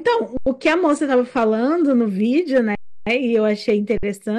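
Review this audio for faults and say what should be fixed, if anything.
Hard clipping runs through the whole clip. The signal reaches the converter about 8 dB hotter than it can pass, so a small fraction of samples, under one percent, are cut flat. The flattened peaks add high harmonics, heard as crackle on the loudest syllables. Fix this by lowering gain before the converter so peaks keep headroom below full scale.

An adaptive stream starting at a low bitrate affects 0 to 2.09 s. The player began on a reduced version of the stream, and nothing above 9.8 kHz is present there, which fits a low-rate AAC rendition of around 32 kbit/s. At 2.09 s the treble returns suddenly and without a gap as it steps up to a better rendition, which fits around 96 kbit/s. Fix this by starting playback on a higher rendition or buffering briefly before playback begins.

An underrun with held sample occurs three times: 0.37 to 0.46 s (93 ms, which fits a 4096-sample gap), 2.75 to 3.07 s (314 ms), and 3.98 to 4.03 s (54 ms). 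Each time the output buffer ran dry and the converter held its last value, so the sound freezes flat with almost no click. Playback then resumes where it stopped, so each resumption is soft. Fix this by enlarging the output buffer or giving the audio thread higher priority so it never runs empty.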